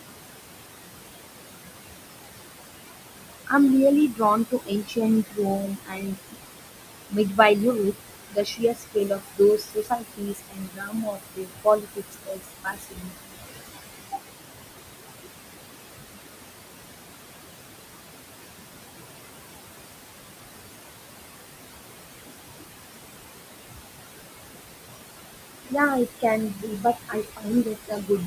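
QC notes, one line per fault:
Throughout: noise suppressor artifacts. The room noise sits only about 9 dB below the speech. The suppressor pulls it down by about 20 dB frame by frame. The background dips between phrases and returns under them.
4.11–6.37 s, 7.08–7.39 s, 8.3–13.35 s, 26.06–28.26 s: speech cut by the noise suppressor. Parts of the speech were treated as noise and turned down by about 21 to 22 dB. Roughly a second is lost in the first and last spans, a fifth of a second in the second, and about three seconds in the third. Those sounds come out swallowed and faint.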